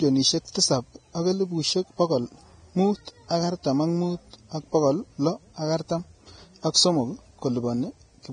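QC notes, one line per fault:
Throughout: Vorbis compression, likely. The speech sounds hissy and grainy, nothing above 9.7 kHz, treble detail replaced by noise-like fill. This fits heavy low-bitrate coding, around 23 kbps. A spectrogram shows a hard ceiling at 9.7 kHz with speckled, smeared high bands and soft onsets.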